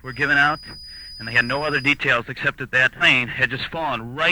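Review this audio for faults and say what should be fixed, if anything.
A thin tone near 4.9 kHz sits under the sound from 0.0 to 2.0 s, well below the main level. This is a likely feedback whistle. Reduce loudspeaker gain or move the microphone away.

At 2.98 to 3.03 s the sound jumps ahead with a small blip. A stream segment was likely skipped. Add buffering and retry failed segment loads.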